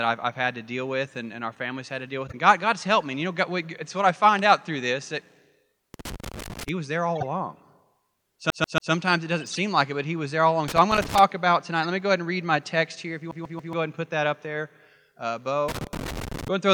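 The first corrupt frame decoded lands at 2.27 to 2.34 s: a short chirpy blip where the decoder played a damaged compressed frame anyway. Flipped bits gave it wrong gains or misread codes, so energy shows up at frequencies where the speech doesn't put it. It comes back at 7.15 to 7.26 s, then longer at 9.39 to 9.59 s, and as a tiny squeak at 11.83 to 11.86 s. The length of each blip points to roughly three, four, seven and one damaged frame.

Between those, at 5.94 to 6.69 s, there's a burst of loose connector crackle. A worn or dirty contact is making and breaking as it moves, chopping the signal into irregular scratchy crackle. The same crackle returns at 10.68 to 11.19 s and again near the end, at 15.68 to 16.48 s. Its uneven texture marks it out from the codec blips.

At 8.50 to 8.92 s the speech gets CD stuck on one turn. A scratch keeps throwing the laser back to the same spot, so a 140 ms slice plays three times over with a brief mute at each jump. 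The result is that quick, perfectly even stutter of a skipping disc. It happens again, identically, at 13.31 to 13.73 s, with the same 140 ms loop repeating three times.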